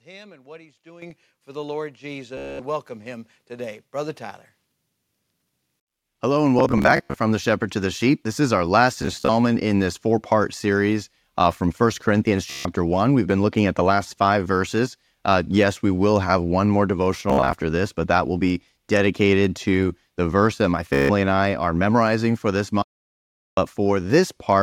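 At 1.02 s the microphone volume steps up by about 10 dB. Further steps of about 3, 3 and 2 dB follow at 2.04, 3.06 and 4.08 s. Speech and background jump together each time.

A Bluetooth stutter runs from 2.37 to 2.59 s. It recurs at 6.59 to 7.14, 9.02 to 9.29, 12.50 to 12.65, 17.30 to 17.53 and 20.93 to 21.10 s. Lost packets make the receiver repeat short slices, heard as a buzzing stutter. Speech then resumes further on, with the missing stretch skipped.

From 22.82 to 23.57 s the audio drops out to dead silence, with no room tone. This audio dropout to silence is likely a lost input link.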